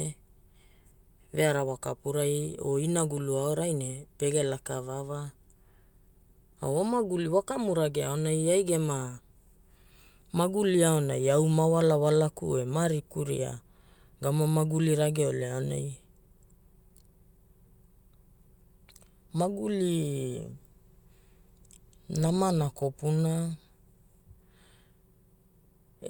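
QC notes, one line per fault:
No technical faults are present anywhere in the speech signal.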